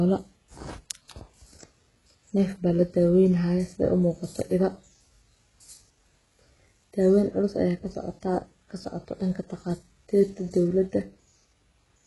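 From start to finish the speech carries what is likely HE-AAC compression at heavy damage. Its upper band is rebuilt from copied lower bands, so sibilants sound gritty and metallic rather than simply dull, with nothing above 11.5 kHz. That fits a very low bitrate near 12 kbps.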